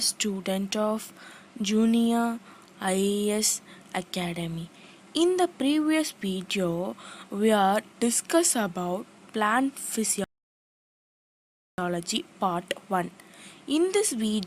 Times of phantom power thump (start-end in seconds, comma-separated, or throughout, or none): none